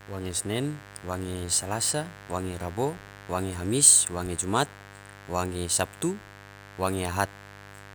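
A steady, raspy buzz sits under the speech from the first moment to the last, roughly 20 dB below the speech itself. This is mains buzz on a 50 Hz supply. Sharp switching spikes, from something like a dimmer or rectifier or an unshielded line, leak into the signal twice per mains cycle. That adds a dense stack of 50 Hz harmonics reaching up to several kHz, which gives the buzz its gritty edge rather than a smooth hum.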